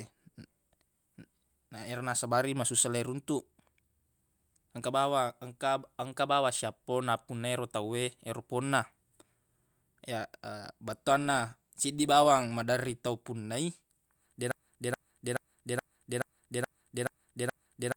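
At 14.51 s the speech becomes a broken-record loop. One 0.43 s fragment repeats exactly, back to back, eight times, until the clip ends. The likely cause is a stalled player, encoder or stream resending its last fragment. The audio meant for that stretch is lost.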